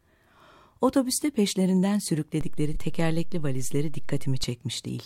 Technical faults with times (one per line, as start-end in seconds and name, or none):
2.41-4.44 DC step
2.74-2.77 AAC frame loss with concealment